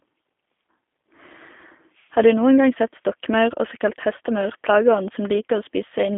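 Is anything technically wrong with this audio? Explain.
Yes. Throughout the speech the sound carries G.729 codec coding, consistent with an 8 kbit/s VoIP stream. The codec models each short frame as a vocal tract filter plus a pitch predictor and a few excitation pulses, discarding the original waveform detail. The line band runs from about 250 Hz to 3.5 kHz with nothing above 3.6 kHz, so the voice sounds thin and muffled, and the coding damage is plainly audible as a rough, synthetic buzz.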